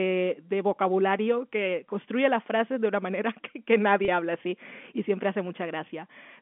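At 4.05 to 4.08 s, just before "habla así y siempre", there is packet loss with pitch repetition. About 30 ms of audio went missing, which fits three 10 ms packets. The receiver filled the gap by repeating the last pitch period, so the sound briefly holds with a slight buzz before resuming. The G.711 telephone coding limits the sound to the 200 Hz to 3.4 kHz line band.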